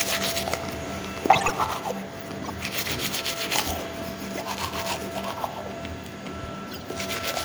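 Four bursts of corrupt frame decoded turn up, at 1.33–1.53 s, 2.44–2.50 s, 4.35–4.44 s and 6.71–6.83 s. The decoder played damaged frames anyway, throwing energy at the wrong frequencies, so you get chirpy, noisy blips. The first is longest and loudest, the rest shorter and quieter.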